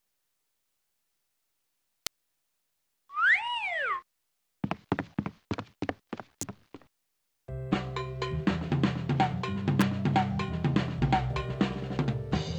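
Sharp snaps at 2.07, 6.41 and 9.81 s, peaking around -10 to -15 dBFS, sit on top of the audio: electrical switching spikes, likely arcs from nearby switching.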